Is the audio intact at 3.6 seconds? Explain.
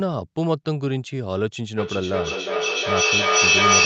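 No. From 1.77 s to the end of the clip, the audio has feedback echo between two devices. A second device in the same room plays back this microphone's audio, and the microphone picks it up again. Neither echo canceller removes sound that another device played, so the loop keeps going. At 3.6 s each sound comes back roughly every 0.4 s, thinner and ringing. The repeats pile up instead of fading, reaching about 8 dB above the speech.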